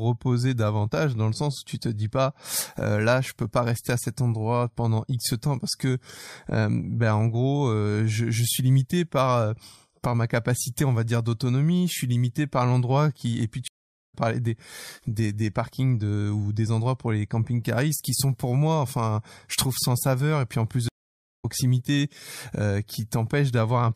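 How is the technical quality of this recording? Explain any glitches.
The speech is interrupted twice by a stream reconnect. From 13.68 to 14.15 s the audio drops to silence for 390 ms and resumes just before "parlé des". From 20.89 to 21.45 s, right after "puis en plus", a 484 ms gap follows. Each time the connection broke, the player went quiet, reconnected and started a new decoder partway through the live stream. Playback picks up roughly 0.4 s later than where it stopped, so a short stretch of speech is skipped and the sentence jumps forward.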